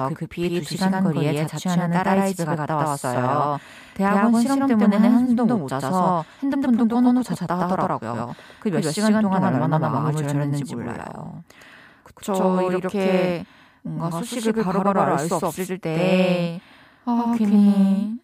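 The speech was most likely captured twice, with a slower second path or an edit leaving two copies out of step. Throughout, a doubled audio track results: an equally loud, full-band copy trails about a tenth of a second behind, with no decay or room colour, smearing every syllable.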